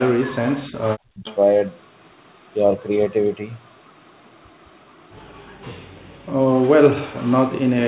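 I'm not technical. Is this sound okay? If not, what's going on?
No. There are three problems in this speech clip.

From the start to 1.25 s, the voice sinks very low and breaks up for about a second in total. This is speech suppressed in double talk: both sides likely talked at once, and the call's echo-removal step muted the talker along with the echo.

From 1.25 to 1.36 s, a faint, brief repeat of the voice arrives about 280 ms late. That is an echo leak: the far end is likely on a loudspeaker, and some of its playback slipped back into the call.

From 5.44 to 6.55 s, the room sound behind the voice drops away almost completely for about a second, then returns. This is background gated by the echo canceller, which clamped the microphone down hard while the loudspeaker was playing. The dull, telephone-like sound with nothing above 4 kHz comes from the normal call path and is not one of these faults.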